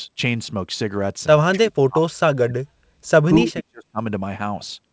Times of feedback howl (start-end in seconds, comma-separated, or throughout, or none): none